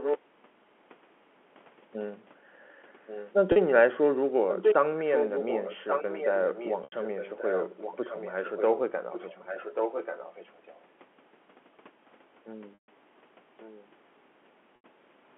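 A speech recording, carried over a narrow telephone band of about 250 Hz to 3.4 kHz, which fits G.711 coding. A delayed second copy of the voice trails the speech by about 1.14 s, at 0 to 0.19 s, 3.06 to 3.33 s, 4.49 to 4.75 s, 5.05 to 8.79 s, 9.11 to 10.8 s and 13.6 to 13.87 s. It varies from barely audible near 13.6 s to louder than the speech itself around 4.5 s. This is an echo leak, likely from a far end on a loudspeaker whose echo canceller let its own microphone pick-up back into the call. Brief held, buzzy tones replace the speech at 3.52 s (40 ms), 6.84 s (80 ms), 12.74 s (140 ms) and 14.76 s (80 ms). The longest of these fades towards silence before the voice cross-fades back. This is packet loss with pitch repetition: the receiver loops the last pitch cycle to fill each gap, and the lengths fit runs of 20 ms packets.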